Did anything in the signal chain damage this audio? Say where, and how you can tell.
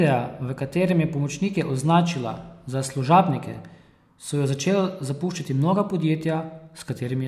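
No, nothing audible along this speech recording's chain points to damage at any stage, from capture through to playback.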